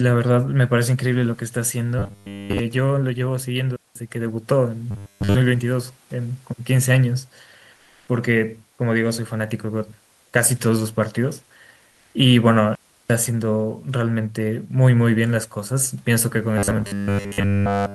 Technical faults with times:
1.99-2.59 robotic sound from repeated short buffers
3.76-3.96 playback stall
4.91-5.35 robotic sound from repeated short buffers
7.75-8.07 comfort noise in place of the background
11.91-12.13 comfort noise in place of the background
12.75-13.10 playback stall
16.58-17.95 robotic sound from repeated short buffers

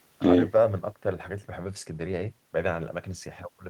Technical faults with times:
none

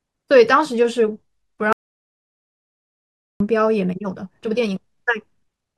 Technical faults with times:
1.73-3.40 audio dropout to silence
3.76-5.78 time-stretched section

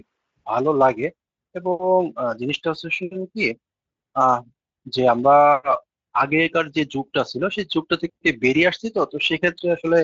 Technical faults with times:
0.00-10.04 Speex codec

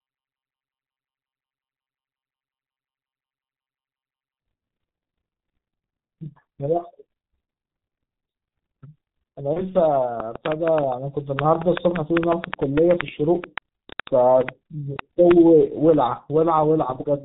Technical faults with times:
0.00-17.25 G.723.1 codec
9.53-9.74 VoIP packet loss concealed by the speech codec
10.20-15.95 train of clicks

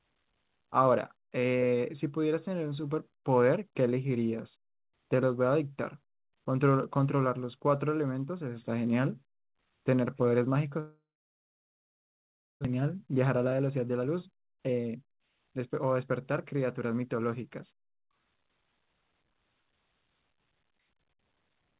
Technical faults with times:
10.80-12.67 long network dropout
12.74-17.01 jitter buffer speed-up

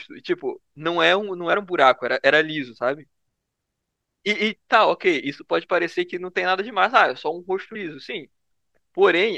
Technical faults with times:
1.53 compressed frames skipped
7.74 compressed frames skipped

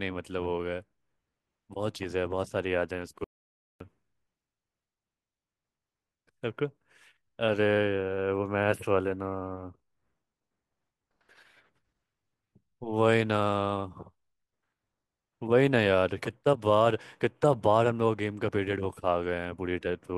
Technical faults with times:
3.24-3.80 audio dropout to silence

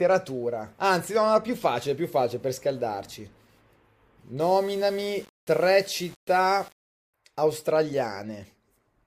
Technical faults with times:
4.40-7.14 low bit depth without dither

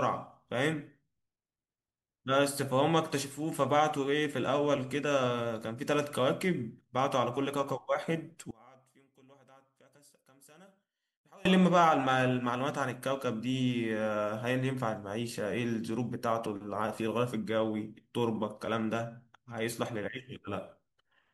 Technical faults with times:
8.51-11.45 one channel inverted

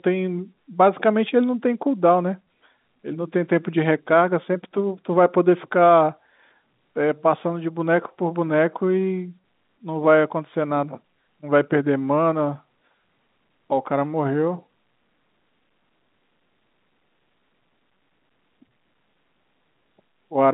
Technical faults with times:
none

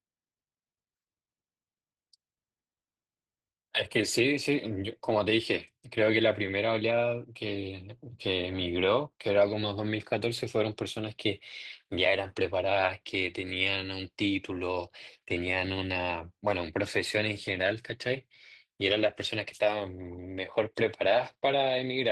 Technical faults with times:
0.00-22.12 Opus voice compression

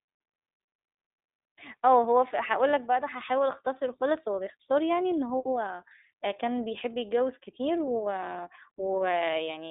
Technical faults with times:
0.00-9.71 iLBC codec

